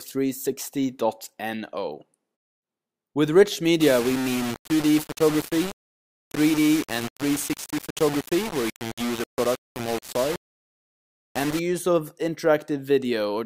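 From 3.81 to 11.59 s, likely low bit depth without dither, fitting about 4 bits, leaves grainy distortion that tracks the sound about 10 dB below it.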